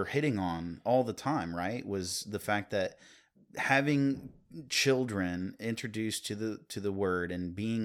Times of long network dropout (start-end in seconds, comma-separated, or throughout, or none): none